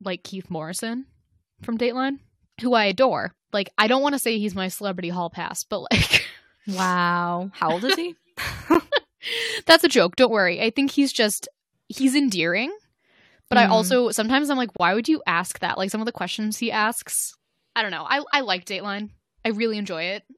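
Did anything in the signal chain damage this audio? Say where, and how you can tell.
Yes, at the playback stage, where segmented streams are stitched together. There is a gap between stream segments at 8.74 s, about 10 ms, and another from 14.77 to 14.80 s, about 29 ms, between "also sometimes I'm like" and "would you ask that". They sit 6 s apart, which fits 6-second segments whose timestamps leave a hole that the player fills with silence. On a waveform each appears as a flat dead stretch with abrupt edges, and on a spectrogram as a thin, fully blank vertical band.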